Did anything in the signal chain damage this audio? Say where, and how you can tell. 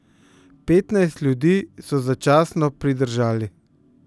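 No, nothing damaged it.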